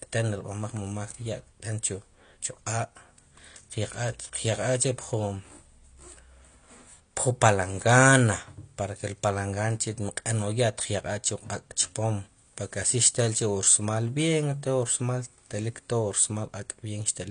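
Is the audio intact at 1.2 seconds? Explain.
No. The whole speech clip, including 1.2 s, carries AAC compression damage. Nothing sounds above 9.8 kHz, and the audio is dull and smeared, which likely points to low-bitrate AAC near 32 kbps.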